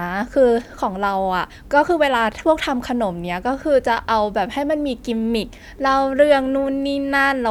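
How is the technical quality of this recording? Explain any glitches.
The technical quality of this recording is sound, with no glitches to explain.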